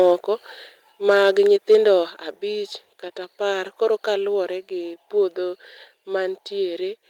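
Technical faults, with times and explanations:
1.08–1.3 s and 1.71–1.9 s, microphone overload: the input level was most likely set too high, so these peaks ran about 3 dB past the converter's ceiling and their tops were sheared flat. A small share of samples is clipped, somewhat more in the second stretch. The flattened waveform adds a harsh, crackly edge to the loudest speech in both places.
1.1 s and 2.1 s, microphone volume stepped down: the call software likely reacted to the overloaded peaks by cutting the device's input volume in single steps, about 2 dB at 1.1 s and about 5 dB at 2.1 s. Speech and background drop together at once rather than fading. The first cut lands inside the first distorted stretch, and the deeper second cut follows shortly after the second one.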